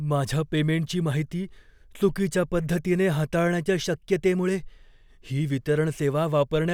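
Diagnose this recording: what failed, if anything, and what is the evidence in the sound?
Nothing failed; no fault is audible in this recording.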